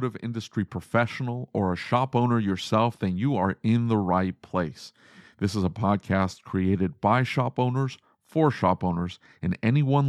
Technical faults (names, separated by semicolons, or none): none